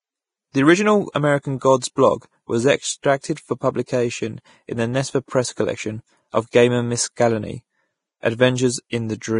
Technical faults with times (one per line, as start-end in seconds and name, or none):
0.00-9.39 Vorbis compression